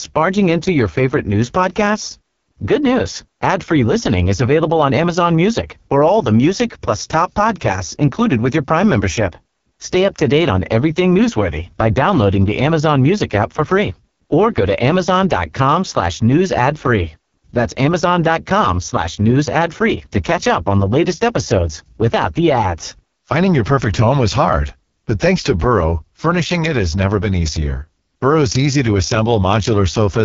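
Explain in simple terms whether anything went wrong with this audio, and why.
Throughout the speech, the sound has a rough, raspy, buzzy edge, with nothing above about 7 kHz. This is heavy AMR wideband (HD Voice) codec damage at one of its lowest settings, where the voice is rebuilt from a simplified model. Simple muffling would dull the sound without adding this grit.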